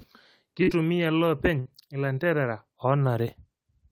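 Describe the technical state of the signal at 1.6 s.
At 1.6 s the signal is hit by a burst of packet loss, running from about 1.59 to 1.67 s. Several consecutive packets failed to arrive in time, so the receiver concealed the hole by extending the last good stretch of speech for about 63 ms while fading it down. That concealment is heard as a brief held buzz or fading hiss. When real audio resumes, roughly 60 ms of speech has been skipped, leaving a small jump forward.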